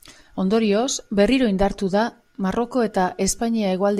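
Speech with no audible faults.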